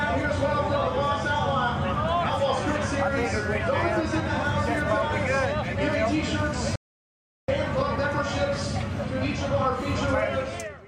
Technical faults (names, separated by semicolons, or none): audio dropout to silence